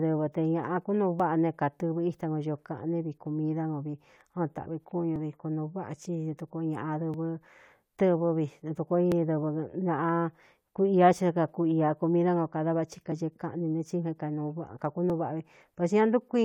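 At 1.20 s after "te ñāꞌa kúnuu", then 5.16, 7.14, 9.12, 11.13 between "ku ia" and "ci á", 13.12 after "kada vathi", and 15.10 s, the speech clicks or skips. This is overlap between stream segments: timestamps overlap, the player trims real audio at each 2 s boundary, and the waveform jumps.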